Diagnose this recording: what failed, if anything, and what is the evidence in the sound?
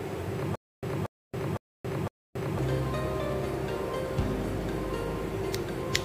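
From 0.55 to 2.59 s, one 234 ms fragment repeats four times on an even 508 ms cycle, each time dropping into 274 ms of dead silence. This stutter with silent gaps likely means a stalled playback stream replayed its last buffer at each retry, losing the audio between.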